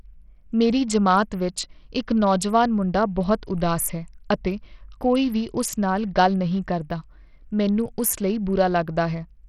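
A speech clip carrying what is likely Bluetooth SBC compression throughout, with a starved bit pool that fits a low bitrate around 64 kbps. Nothing survives above 14.8 kHz, the remaining treble flickers, and heavy gritty quantisation noise and aliasing ride on the sound.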